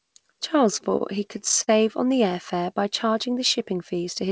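From 0.90 to 1.70 s the speech shows repeated stalls (stutter), just before "on the air fare". The jitter buffer ran dry nine times. Each gap, the longest 50 ms, was filled by stretching the last sound. About 137 ms was patched, and nothing is lost. The audio drags and hiccups.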